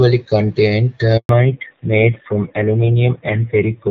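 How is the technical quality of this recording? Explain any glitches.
The speech has two connected faults: a brief dropout, then a permanent loss of bandwidth. Before them it carries the light coding texture of HD Voice, consistent with AMR-WB at about 12.65 kbit/s.

At 1.17 s there is a handover gap lasting 120 ms, to 1.29 s. No frames arrived while the call switched networks, so the speech fades abruptly into silence until the new link resumes.

From 1.29 s to the end there is a fallback to narrowband. The call drops to an older narrowband codec, which fits AMR-NB at about 5.9 kbit/s. Nothing remains above 4 kHz, and the speech sounds duller and rougher.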